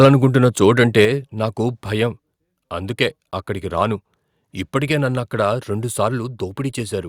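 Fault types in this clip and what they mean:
Microphone overload: From 0.03 to 0.08 s the loudest peaks have their tops flattened, about 2 dB beyond the converter's limit across a small fraction of samples, giving a brief harsh, crackling edge. The likely cause is input gain set too high for the converter.
Microphone volume stepped down: The level of speech and background drops abruptly in single steps, by about 2 dB at 0.05 s, during the distorted peak, and by about 6 dB at 1.05 s. This likely reflects call software cutting the device's input gain after detecting clipping.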